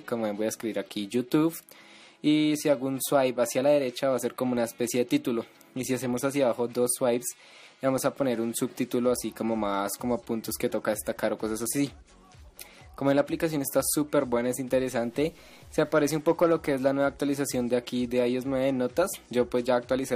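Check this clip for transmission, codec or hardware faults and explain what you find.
There's one fault, a stretch of low bit depth without dither from 14.71 to 16.21 s. For that second and a half the sound turns grainy, with a gritty distortion that tracks the signal, and quiet moments break up or sputter. The error sits roughly 40 dB under the signal, which fits 8-bit truncation. The likely cause is a stage that chopped the samples down to a few bits with no dither, so the rounding error stays locked to the waveform.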